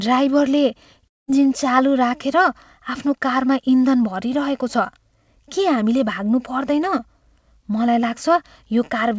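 At 1.08 s the speech breaks off and a buzzy continuation of the last sound takes its place, fading toward silence until the audio resumes at 1.30 s with about 0.2 s missing. The likely cause is a long network dropout, with the receiver filling the gap it never got. On a spectrogram the harmonics smear and thin out across that stretch into a near-empty band. The waveform shows a tapering envelope that flattens out. Above 8 kHz the spectrogram is bare throughout, as expected from the G.722 call path.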